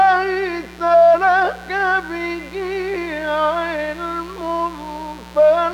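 From the first moment to the end there's a mains buzz running under the sound, and it never lets up. It sits on a 60 Hz mains supply, so something like a dimmer, a rectifier or an unshielded lead is letting sharp switching spikes in twice per cycle. That stacks up a ladder of 60 Hz harmonics climbing into the kilohertz range, giving a steady, raspy edge rather than a smooth hum, sitting roughly 20 dB below the main signal.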